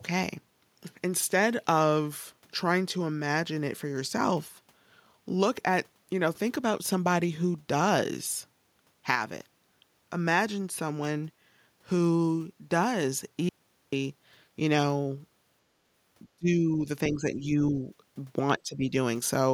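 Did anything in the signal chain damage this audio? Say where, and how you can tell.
Yes. Call processing likely caused speech suppressed in double talk: the echo canceller mistook the talker for echo, ducking them at 16.36–16.87, 17.07–17.76 and 18.55–18.92 s, by up to about 30 dB.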